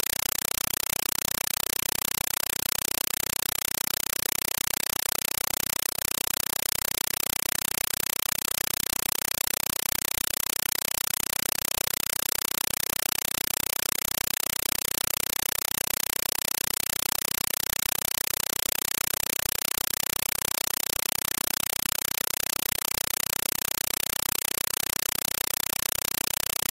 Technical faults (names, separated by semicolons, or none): compressed stream played as audio